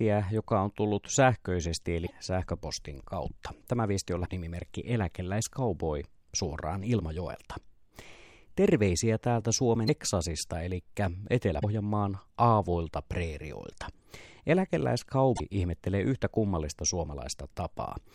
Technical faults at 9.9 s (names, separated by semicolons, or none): broken MP3 bit reservoir